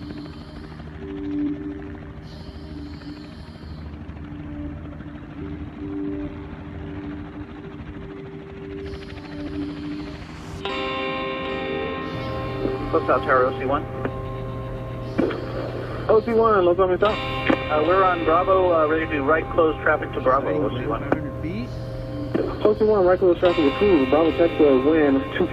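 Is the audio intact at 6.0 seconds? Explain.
Yes, the audio is intact at 6.0 seconds, with no dropout, click, distortion or other fault at that point.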